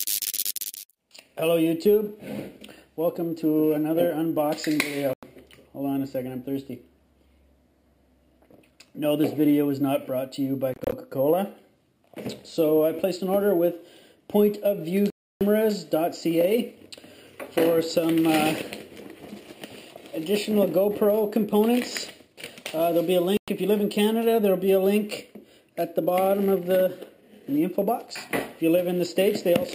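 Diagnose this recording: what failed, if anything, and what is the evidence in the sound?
Silent gaps at 5.13, 10.74 to 10.92 (broken up), 15.10 to 15.41 and 23.37 s, with the audio resuming as if it had played on: likely a Bluetooth dropout discarding late packets.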